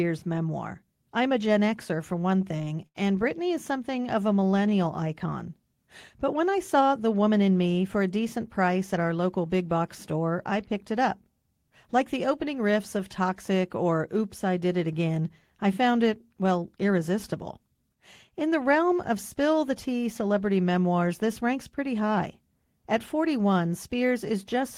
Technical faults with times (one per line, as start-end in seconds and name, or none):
2.01-2.98 repeated stalls (stutter)
3.96-4.71 jitter buffer slow-down
6.74-7.30 jitter buffer speed-up
23.93-24.63 jitter buffer speed-up